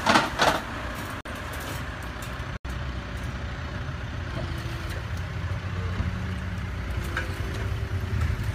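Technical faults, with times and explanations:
1.21 to 1.25 s and 2.57 to 2.65 s, block of digital silence: the audio drops to silence twice, for about 46 ms and then 78 ms, and returns with no fade. Each abrupt cut and restart is heard as a short hole. The first gap fits a 2048-sample buffer that was never filled in time. Unlike a fade, a level dip or a concealed dropout, nothing is smoothed or filled in.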